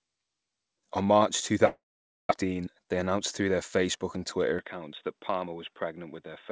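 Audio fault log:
1.66–2.32 s, long network dropout: the last sound is carried on as a buzz or hiss that fades, then close to half a second of silence follows before the audio resumes with a stretch simply missing. This is longer than brief loss concealment, and the gap likely comes from the network stalling.
2.42–3.49 s, jitter buffer speed-up: the audio runs about 11% fast with unchanged pitch, sounding hurried, as the receiver trims small pitch-period pieces, roughly 150 ms in all, to shed the delay that built up. Pitch-preserving speed separates it from resampling or a playback-rate error.
4.59 s to the end, input switched to a poorer device: the sound turns dull and boxy with nothing above 3.8 kHz, against roughly 8 kHz of bandwidth earlier. That band is narrowband, like a telephone line. The level also drops about 5 dB, with a new noise floor around 50 dB down and no silence at the change. 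The tone, level and noise all change together, which points to a likely swap of the microphone or headset profile rather than a codec change.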